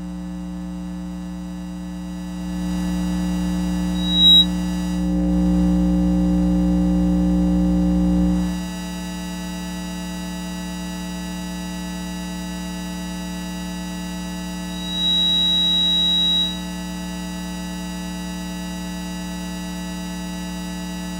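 At 3.95 s a loudspeaker feedback squeal swells up at 3.8 kHz within a fraction of a second, well above the sound, until it cuts off at 4.48 s. At 14.68 s the same 3.8 kHz tone builds again, a little more slowly and only slightly above the sound, and lasts until 16.74 s. In both, the microphone is hearing its own loudspeaker, and the loop keeps amplifying that one frequency.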